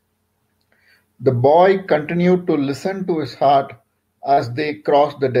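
At 4.33 to 4.39 s, about 40 ms of the speech arrived too late for the decoder, and the receiver concealed the gap by extending the preceding sound for 36 ms before blending back. This short concealed packet loss is heard as a brief smear.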